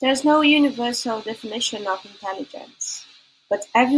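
Nothing technical goes wrong anywhere in this short bit of speech, so there's no fault to point to at any moment.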